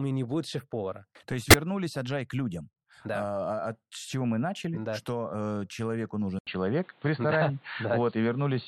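A damaged compressed frame reached the decoder and was played anyway in this speech recording: a corrupt frame decoded at 1.50 to 1.54 s. Flipped bits inside that single frame made the decoder apply wrong gains and spectral codes, so for those roughly 35 ms energy lands at frequencies that don't belong to the signal. It comes out as a chirp, squeak, blip or burst of noise, peaking near -10 dBFS. Later, the recording likely had its input switched to a poorer device, from 6.39 s to the end. After an 80 ms silence at 6.39 s, the sound returns narrowed, with nothing above 4.5 kHz, so it turns dull and boxy. The level shifts by around 5 dB, and a new background noise floor sits only about 30 dB below the signal.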